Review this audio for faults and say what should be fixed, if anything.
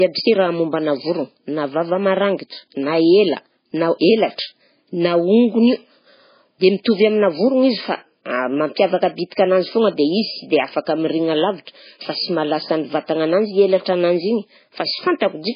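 Throughout the speech, everything above 5 kHz is missing and smeary coding artefacts remain, likely low-bitrate audio saved at a high bitrate. Unlike a plain filter, it fits a 16 kbit/s MP3 re-encoded at 256 kbit/s. To prevent it, re-export from the original uncompressed source instead of re-encoding the low-bitrate file.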